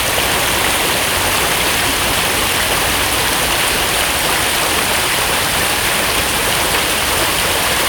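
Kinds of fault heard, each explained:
Repeated buffer, 1.06 s and 5.69 s: late audio forced a 2.67 ms block, fitting a 128-sample buffer, to replay twice, then once, as hard-joined clicks.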